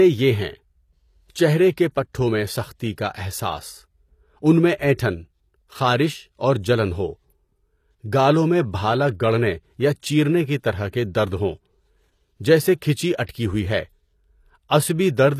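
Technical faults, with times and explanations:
Throughout, HE-AAC compression: the speech has plainly audible codec damage, with nothing above 15 kHz and a treble that sounds bright but synthetic, so s sounds come out gritty and metallic. The likely cause is spectral band replication: only the lower band is coded, and the upper band is rebuilt from copies of it under a coarse envelope, which fits a bitrate near 24 kbps. A plain low-pass would sound dull, not falsely bright like this.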